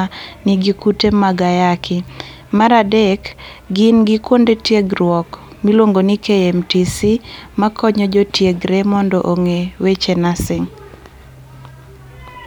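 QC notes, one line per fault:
No faults found in the speech. Nothing in the recording calls for a QC note.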